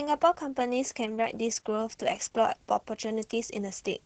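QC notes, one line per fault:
Throughout, Opus voice compression: the sound stops at about 8 kHz and is muffled, hoarse and faintly robotic. The SILK linear-prediction coder is coding the excitation very coarsely, and damage this heavy fits a bitrate around 10 kbps.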